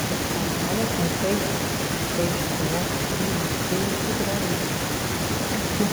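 Echo with no canceller runs throughout this speech recording: every phrase returns roughly 150 ms later as a thinner copy about 13 dB down. The far end's loudspeaker is feeding its microphone, and nothing subtracts that leak before it travels back.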